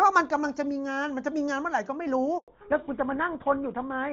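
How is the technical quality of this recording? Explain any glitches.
The recording has two linked faults in the second half: a short dropout followed by a lasting loss of bandwidth. Before that, the speech has the full, clear sound of HD Voice, consistent with AMR-WB at its top rate of about 23.85 kbit/s, with little or no audible coding damage.

From 2.38 to 2.48 s the speech dies away and there is silence for about 100 ms. This is a handover gap. The call was passed from one network to another, and no speech frames arrived while the new link was being set up. The phone had nothing to play during that tenth of a second, so whatever was said in that window is gone.

From 2.48 s to the end, the voice sounds duller, muffled and rougher. The crisp high end of the consonants is missing because nothing above 4 kHz remains. This is a fallback to narrowband. After the handover, the call dropped from HD Voice to an older narrowband codec. 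The sound points to GSM full rate at 13 kbit/s, which carries only the classic telephone band.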